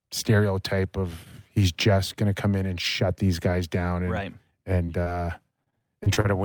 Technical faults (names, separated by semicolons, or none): short concealed packet loss; repeated packet loss (robotic sound)